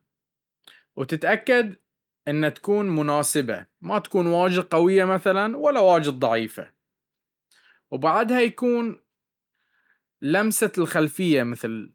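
No technical faults can be heard anywhere in this speech.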